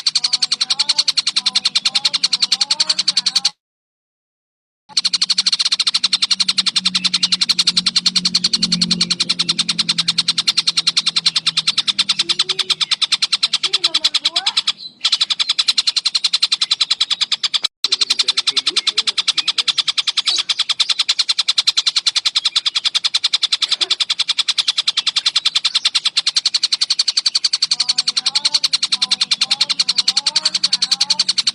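At 3.49 s the audio breaks into a buzzy continuation of the last sound that quickly fades, leaving about 1.3 s of near silence until it returns at 4.95 s. Around a second of material never comes back. This is likely a long network dropout, with the receiver stretching out the last received audio to cover the gap. From 5.00 s to 7.64 s the sound then runs noticeably hurried, about 115% of normal speed with the pitch unchanged. This is a jitter buffer speed-up. After the dropout, the backlog that built up, roughly 0.4 s of extra delay, is trimmed by repeatedly cutting out short pitch-period-sized pieces until playback catches up.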